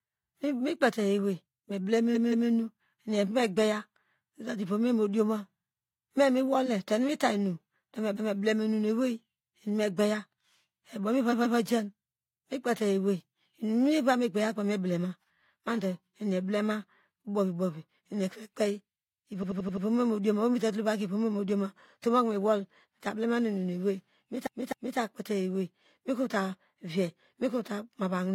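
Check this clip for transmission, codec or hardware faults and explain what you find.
Repeated frames are audible in this speech at five points. From 2.11 to 2.45 s, a 171 ms block plays twice more. From 8.13 to 8.34 s, a 213 ms block plays once more, just before "enu mu". From 11.29 to 11.54 s, a 128 ms block plays twice more. From 19.39 to 19.82 s, an 85 ms block plays five more times. From 24.43 to 24.95 s, a 256 ms block plays twice more. Each time, a run of compressed frames was delivered more than once, so the decoder replays that stretch. The result is a stutter, and each event lengthens the audio by the repeated time, up to about half a second at 24.43 s.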